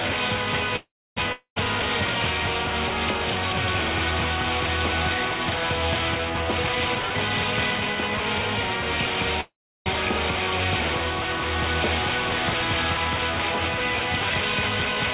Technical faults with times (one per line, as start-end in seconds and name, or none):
0.76-1.18 call audio freeze
1.32-1.58 long network dropout
6.41-8.34 jitter buffer speed-up
9.41-9.88 call audio freeze